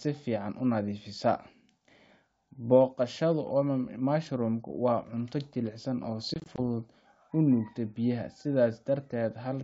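Just after "jilicsan oo", from 6.34 to 6.60 s, packet loss on an ADPCM call punches several short silent gaps of up to 20 ms. Unlike a clean dropout, each resumes slightly distorted while the decoder resynchronises.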